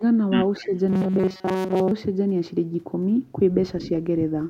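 A short speech recording with three kinds of fault. Between 0.61 and 0.7 s the speech briefly sags by about 5 dB for roughly a tenth of a second. This is likely speech suppressed in double talk: with both ends active at once, the echo canceller could not tell the local talker from the loudspeaker echo and pulled the level down on both. Overlapping that moment, from 0.65 to 0.71 s, a faint delayed copy of the speech appears about 243 ms behind the original and around 25 dB below it. A second, more noticeable copy follows from 3.81 to 3.89 s, again about 244 ms late and only around 15 dB down. Both are echo leak, likely from a far end playing the call on a loudspeaker whose echo canceller let part of its microphone pickup through and sent it back. From 0.9 to 1.91 s the speech becomes a stiff metallic buzz locked at 188 Hz while still loosely following the speech contour, with most of the stretch, roughly two thirds or more, made of repeats. 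That is robotic sound from repeated short buffers, likely caused by audio arriving too seldom so the playback software kept recycling its last fragment. The 188 Hz pitch fits a repeated block of about 5.3 ms, and the real audio in those gaps was skipped.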